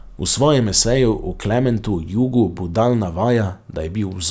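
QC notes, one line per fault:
No faults were found in this speech clip. Nothing in it needs attention for QC.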